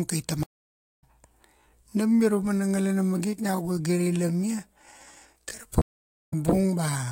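At 0.43 s there's a stream reconnect: the speech drops out for 576 ms, and the new decoder picks up about 0.4 s further on, so a bit of speech is lost. From 1.51 s to the end the pace abruptly slows to about 0.74x with unchanged pitch, so the speech drags, likely a time-stretched section. Another reconnect hits at 5.82 s with 491 ms of silence, resuming roughly 0.3 s later.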